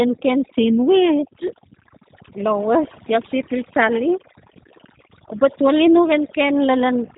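A speech recording with two faults running through its whole length. The first is overdone noise removal. A noise reducer was set far too hard. Each frequency band that came near its noise estimate was pulled right down or shut off. The background drops, broken by twinkling specks where single bands flicker on and off. Quiet parts of the voice were taken out along with the noise. The second fault is G.729 codec damage, and it is plainly audible. The signal was squeezed through a low-rate speech codec that rebuilds the voice from a vocal tract filter, a pitch predictor and a few pulses per frame. The roughness fits 8 kbit/s, likely the G.729A variant. Nothing passes above 3.8 kHz, so the voice is dull and band-limited. It also has a slightly rough, synthetic edge.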